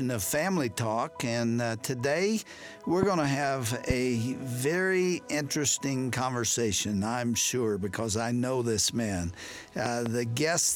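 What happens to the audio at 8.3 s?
Nothing goes wrong at 8.3 s; the audio there plays through intact, with no dropout, click or other fault.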